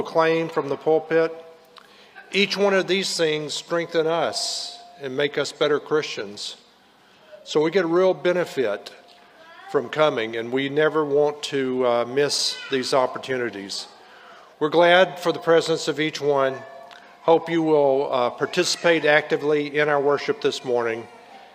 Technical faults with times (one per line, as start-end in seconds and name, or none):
none